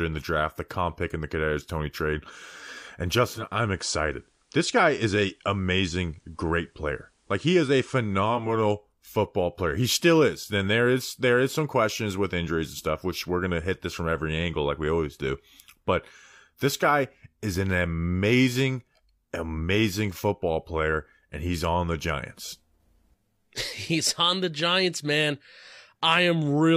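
Digital radio blending to analogue, 3.20 to 8.66 s: the digital signal drops, FM takes over, bringing faint hiss.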